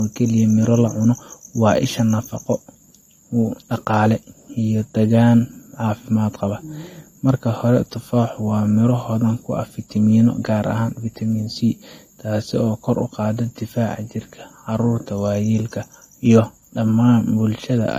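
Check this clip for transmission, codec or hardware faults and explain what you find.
One fault runs throughout: low-bitrate audio saved at a high bitrate. The speech stops dead at 16.6 kHz and keeps the first encode's artefacts, likely from a low-bitrate AAC file re-saved as large MP3. Unlike a genuine high-bitrate recording, the extra data restores nothing.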